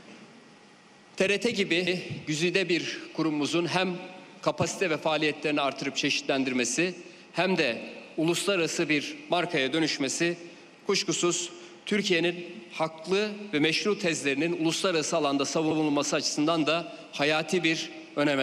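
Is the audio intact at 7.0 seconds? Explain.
Yes, the audio is intact at 7.0 seconds, with no dropout, distortion or other fault at that moment.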